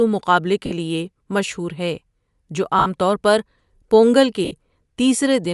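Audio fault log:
throughout: Bluetooth LC3 compression, likely. The speech has a plainly audible breathy, grainy upper band where high frequencies are zeroed and noise-filled, consistent with a 48 kbps, 10 ms-frame setting.
0.66 s, 2.79 s, 4.45 s: lost LE Audio frames. Gaps of 50, 70 and 60 ms are concealed by repeating the last spectrum with random signs, producing brief noisy smears.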